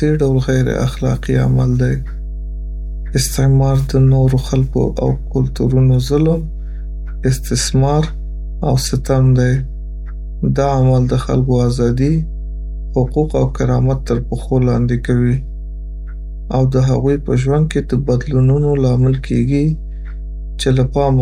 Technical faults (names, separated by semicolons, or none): mains hum